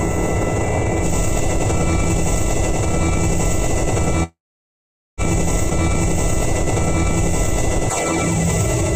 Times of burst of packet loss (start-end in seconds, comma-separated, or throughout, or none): none